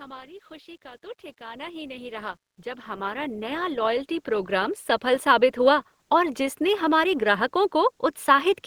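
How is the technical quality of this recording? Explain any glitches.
The recording has one clear technical fault, a slow automatic gain rise partway through the speech. From 1.38 s to 5.55 s, the level climbs steadily, and the background noise swells up together with the speaker rather than staying put. It settles just before "हुआ और". The cause is automatic gain rising: the gain control judged the input too quiet and kept turning its gain up over roughly four seconds, adding about 18 dB in total. The background's lift is the giveaway.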